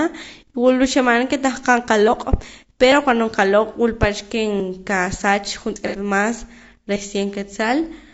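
Low-delay AAC compression runs through this entire speech recording: the voice is plainly rough and grainy, with noise filling the gaps between harmonics, likely from AAC-ELD at a low bitrate around 32 kbps. A dropped buffer (overrun) at 5.76 s is heard as an abrupt jump in the speech, without any silence. Roughly 40 ms of audio was likely overwritten before the software could read it, so the two sides are butted together. AAC frame loss with concealment follows from 5.87 to 5.96 s, a smeared, noisy patch covering about 60 ms of lost audio, which fits two lost frames. The decoder filled the gap by reusing the last good spectrum instead of decoding the real audio.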